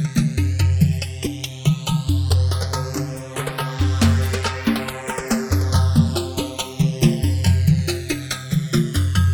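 The audio has channels drifting apart for its whole length. The left and right sides seem to run on separate clocks, off by something like 100 ppm, so the gap between them grows steadily to a little under a millisecond by the end. Summed to mono, the comb notches glide slowly in one direction, giving a slow flanging. Unlike a flanger effect, the sweep never cycles back, and unlike a fixed channel offset, the coloration keeps moving.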